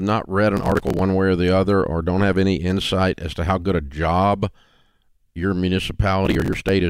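Processor overload crackle occurs from 0.57 to 1.02 s, between "not read" and "way or the other", and again from 6.25 to 6.69 s. Dozens of buffers, each a few milliseconds long, miss their deadline and are skipped. The resulting run of hard-edged gaps sounds like gritty, tearing crackle over the speech.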